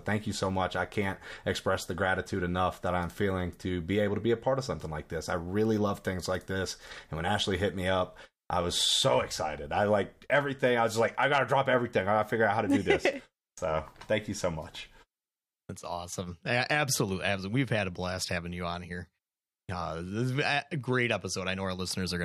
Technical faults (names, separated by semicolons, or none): none